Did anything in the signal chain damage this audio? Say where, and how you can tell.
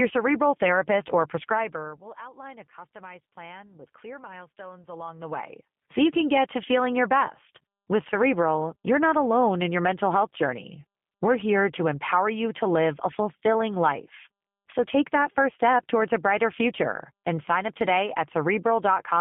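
Yes, at the codec stage: a G.729 codec colours the speech throughout, with plainly audible roughness and a synthetic, buzzy edge on top of a 150 Hz to 3.5 kHz line band. A plain narrowband filter would only dull the sound, but this grain comes from pulse-coded excitation and points to an 8 kbit/s speech codec.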